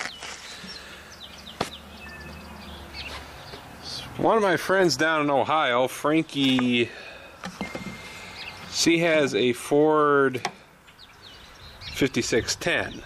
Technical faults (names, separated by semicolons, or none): none